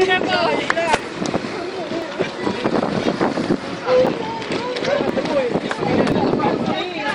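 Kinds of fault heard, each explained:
Periodic USB or driver dropouts: something keeps stalling the audio path on a steady 1.02 s cycle, from 1.00 s to 6.12 s, and each time roughly a millisecond of audio simply gets skipped, so you hear about seven small, evenly spaced ticks.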